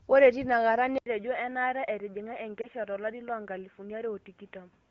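At 0.98 s, after a short silence of about 80 ms, the sound turns dull and boxy, with nothing above 3.8 kHz, a level about 5 dB lower and a new background noise roughly 40 dB down. The likely cause is an input switched to a poorer device. A codec change alone would not bring a fresh noise floor and level shift, even though the HD Voice band above that cut-off is no longer reaching the AMR-WB encoder.

From 2.62 to 2.66 s there is a brief dip or warble, consistent with a single lost AMR speech frame of 20 ms. The decoder bridges the gap by reusing the previous frame's settings at falling gain, so it sounds smeared rather than like a hard silent dropout.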